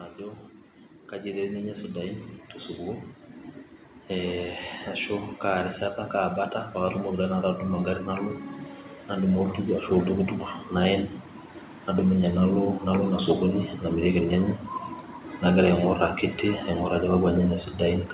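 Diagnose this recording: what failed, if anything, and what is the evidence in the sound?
Automatic gain rising in call processing: the AGC chased a quiet input, swelling voice and background together, about 5 dB over 0.17–2.27 s and about 12 dB over 4.08–11.13 s.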